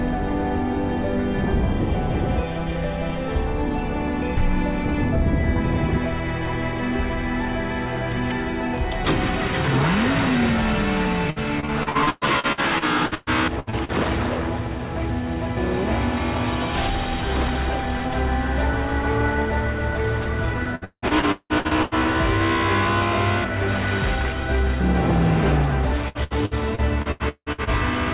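Repeated packet loss (robotic sound) strikes at 11.3 to 13.9 s, 20.63 to 21.94 s and 26.08 to 27.70 s. Packets keep dropping. Each hole is filled by extending the last sound, so the audio turns choppy with pieces missing. The middle stretch is worst: about half is concealed, with gaps up to 181 ms.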